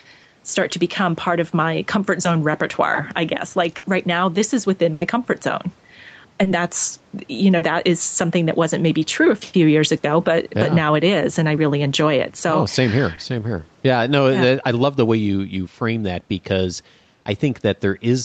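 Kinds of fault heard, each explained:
Gain pumping: The level swings by about 5 dB, pulled down each time the speech gets loud, so loud and quiet syllables sit closer together than they should. The likely cause is gain set too high ahead of a fast limiter. Unlike packet loss, nothing is missing. The level simply moves continuously through the whole clip.
Burst of packet loss: Two longer holes occur. The first is between "zone repertoire I guess" and "right now this is" at about 3.77 to 3.85 s, and the second is between "now this is within" and "comfort zone" at about 4.93 to 5.03 s. In each, the last sound is stretched into a fading buzz or hiss for 60 to 80 ms, and speech then resumes with that stretch gone. These dropouts are longer than the short concealed losses.
Short concealed packet loss: Three brief patches, each 20 to 40 ms long, were filled in by the receiver. They fall at about 6.43 s, at 7.57 to 7.63 s between "that's you know" and "is something that wasn't", and at about 13.15 s. 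Each is heard as a quick smear or wobble rather than a held buzz, unlike the longer bursts.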